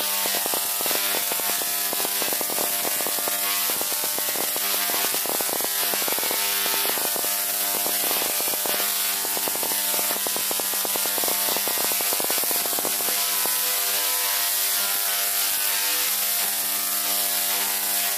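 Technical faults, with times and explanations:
0.01–13.47 s, train of clicks: some 150 alike pops, about 11 per second, irregularly spaced and well above the sound, likely nearby interference; unlike random crackle, they repeat one shape.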